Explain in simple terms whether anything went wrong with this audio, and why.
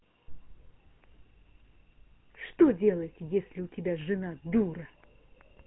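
GSM full-rate codec, throughout: this old mobile-phone codec rebuilds speech from coarse pulses and cuts everything above 3.9 kHz, so it sounds buzzy and gravelly.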